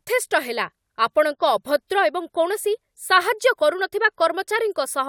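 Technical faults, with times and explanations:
No technical faults can be heard in this speech.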